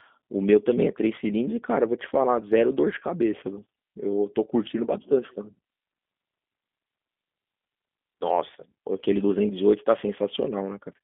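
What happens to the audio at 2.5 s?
At 2.5 s the speech carries the G.729 codec sound present throughout the clip: a narrow 200 Hz to 3.5 kHz line band, with the voice rebuilt from a vocal-tract filter and sparse pulses, which fits an 8 kbit/s coder. Unlike simple band-limiting, it sounds plainly rough and synthetic, not merely muffled.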